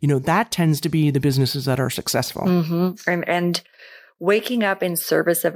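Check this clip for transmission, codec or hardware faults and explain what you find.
Nothing turned up on a listen through this speech recording; there's no sign of any transmission, codec or hardware trouble to point to.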